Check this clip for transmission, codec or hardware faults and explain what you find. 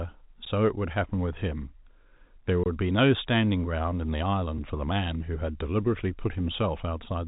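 Three short dropouts to digital silence are the fault here. They sit in speech carried over G.711 telephone coding, with nothing audible above about 3.8 kHz. Each is a block of digital silence. The first comes at 0.45 s and lasts about 12 ms, which fits a 512-sample buffer. The second runs from 2.64 to 2.66 s, about 23 ms, which fits 1024 samples. The third, at 4.58 s, lasts about 4.5 ms. The output buffer was likely not filled in time, so zeros replaced the sound. The cut has no fade. The shortest gap is a tick. The longest is a brief hole.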